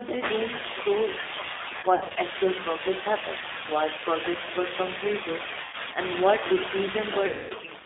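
Speech carried throughout by the G.729 codec, and the coding damage is plain. The band is held between about 250 Hz and 3.6 kHz, and the voice has a slightly rough, synthetic grain, which fits an 8 kbit/s G.729A stream rebuilding each frame from a vocal tract filter, a pitch predictor and a few pulses. A plain low-pass filter would only dull the sound. This roughness comes from the rebuilt excitation. VoIP packet loss concealed by the speech codec breaks in three times. From 1.80 to 2.18 s, dropouts scattered over about 360 ms total 180 ms, with no gap longer than 60 ms. A shorter event runs from 5.64 to 5.77 s, about 90 ms, and a longer one from 7.26 to 7.53 s, about 240 ms, which suggests roughly eight lost packets. During each event the decoder stretches the last sound into a buzzy tone or coloured noise that fades, and the voice stays weak for a while after packets return. A hard dropout would instead give clean silence or clicks.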